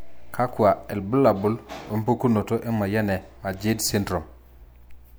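No technical faults are audible.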